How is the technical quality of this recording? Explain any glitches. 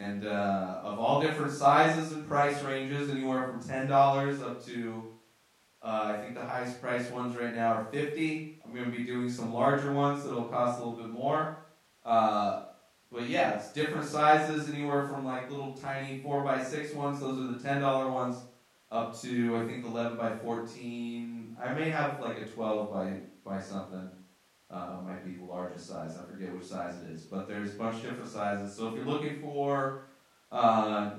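No technical faults are audible anywhere in the recording.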